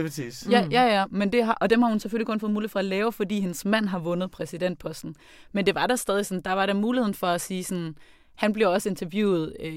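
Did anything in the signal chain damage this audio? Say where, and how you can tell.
No, nothing in the signal chain damaged this audio.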